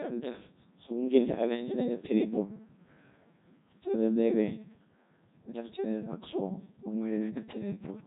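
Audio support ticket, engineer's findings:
Robotic, buzzy speech throughout, nothing above 3.8 kHz. Codec 2 vocoder, consistent with about 1.2 kbit/s: voice resynthesised from pitch and envelope, waveform discarded, heavy damage.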